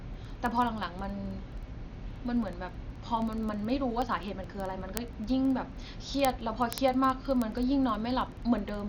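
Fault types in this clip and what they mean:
Dolby Digital compression: The whole clip sounds dull and boxed-in, with nothing above 7 kHz, and the sound carries a rough, fluttery noise where the encoder had too few bits and the decoder filled the gaps with noise. The damage is heavy, which points to a starved bitrate somewhere around 48 kbps. An AC-3 or E-AC-3 encode is the likely cause, since this band-limited, noisy-fill character is typical of that codec pushed hard.
Word clock ticks: From 0.14 s right through to 8.85 s there's a steady run of sharp ticks of uneven strength, roughly one every twentieth of a second, so around 150 across the speech. That rhythm means the receiving device was free-running on its own clock rather than locked to the sender. The two clocks drift apart by a few hundred parts per million, and each slip fits a single sample being dropped or repeated.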